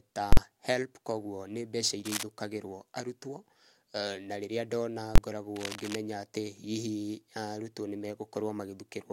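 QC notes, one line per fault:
0.33–0.37 s and 5.16–5.18 s, invalid numbers at full scale: a calculation blew up into infinite or invalid values that got pinned to maximum for a whole block. The result is a hard bang, then a shorter one right after "na rĩrĩa ndona". The 46 ms and 23 ms lengths fit 2048- and 1024-sample blocks.
2.05–2.23 s and 5.56–5.95 s, cable scratch noise: dense, uneven scratchy bursts over the speech. The first comes after "koguo ni mbeca" at roughly speech level, the longer second after "na rĩrĩa ndona" a bit quieter. It's likely a worn cable or connector being moved, its contact resistance jumping around.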